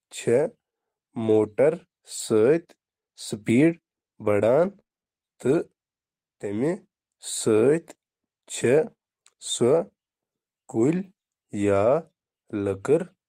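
Lost packet rebuilt from error correction at 1.27–1.37 s: about 60 ms of speech, which points to three lost packets, was replayed from the low-bitrate copies carried in the following packets. There is no gap, but the passage sounds rougher and noisier.

The same happens at 2.17 s, where a single 20 ms frame is rebuilt.

Repeated packet loss (robotic sound) at 4.59–5.60 s: seven short holes, the longest 28 ms, are each patched by extending the preceding sound. About 14% of the stretch, roughly 140 ms, is concealed, giving choppy speech with fragments missing.

Lost packet rebuilt from error correction again at 8.60–8.66 s, where about 40 ms is rebuilt from the backup copies, and at 11.62–11.64 s, where 20 ms is rebuilt. Both are brief, grainier patches with no audible dropout.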